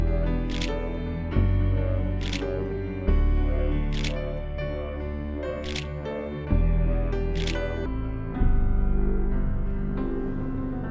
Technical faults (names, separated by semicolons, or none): wrong sample rate